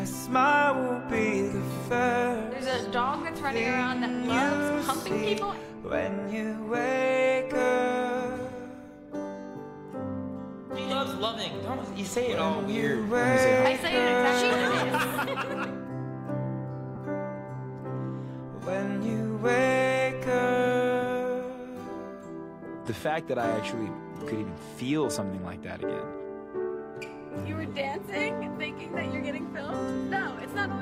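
At about 16.96 s there are lost LE Audio frames: roughly 15 ms dropped out, which fits two missing frames. The LC3 decoder papers over the gap by replaying the last spectrum with randomised signs, so any tonal content briefly turns into a noisy smear.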